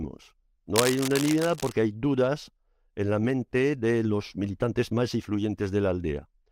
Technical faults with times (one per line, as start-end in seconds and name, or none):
0.75-1.72 cable scratch noise